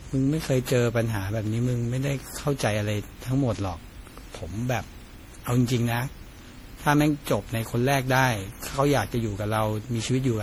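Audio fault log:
Throughout, generation loss: swirly, hollow, smeared speech with blurred attacks, likely from about ten MP3 re-encodes, each requantising on a shifted frame grid.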